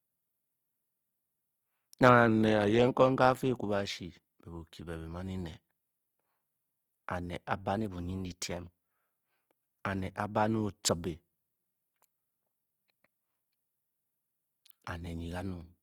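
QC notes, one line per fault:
Throughout, Opus compression: the speech has a grainy, rough texture, with noise filling in detail rather than the swirling, hollow gaps MP3 leaves. That points to Opus in its music mode at a low bitrate, which fits around 24 kbps. The encoder spent its scarce bits keeping each band's energy and filled the rest with noise or folded-up copies. Bandwidth stays full, reaching about 20.2 kHz, so this is not the muffled, narrowed speech mode.
2.28–2.88 s and 7.77–8.92 s, drift correction step: the first span abruptly plays 5.8% slow and drops about a semitone (−104 cents). The second plays 5.8% fast and rises about a semitone (+98 cents). Each snaps back at its end. This is likely clock-matching software briefly changing the playback rate to refill or drain a buffer. Unlike wow or vibrato, the shift is a sudden fixed step with speed and pitch moving together, not a gradual wobble.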